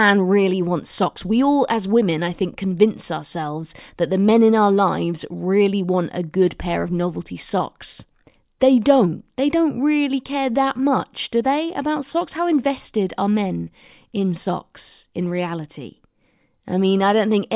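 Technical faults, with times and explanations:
No technical faults detected.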